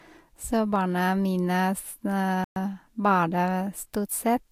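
At 2.44 s, just after "barna mine s", the speech cuts to silence for 120 ms and then resumes, a playback stall, likely from the player running short of data.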